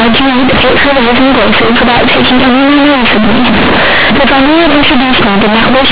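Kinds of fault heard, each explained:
Companded audio read as linear: the speech is very loud and harshly buzzy throughout, with heavy noise filling the pauses and quiet passages blown up to the size of loud ones. The bytes are A-law G.711 telephone data, correctly limited to below 4 kHz, but they are played as plain linear 8-bit samples with no expansion. Each sign change therefore swings the output across roughly half its range, badly distorting the waveform.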